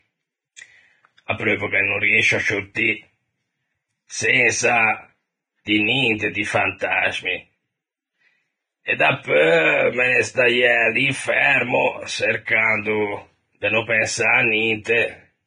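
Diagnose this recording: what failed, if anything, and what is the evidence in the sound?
Vorbis compression runs throughout this speech: the sound is hissy and grainy, with nothing above 9.7 kHz, roughened tones and treble detail turned to noise. That points to heavy coding at a low bitrate near 20 kbps. The likely cause is the codec stage quantising its residue far too coarsely.

Pre-echo occurs at 0.56 s, 2.75 s and 12.45 to 12.48 s. A brief hiss of 16 to 22 ms precedes sharp onsets, which sound soft and smeared. At the same codec stage, quantisation noise spread across each block, sized for the loud attack, fills the quiet moment before it.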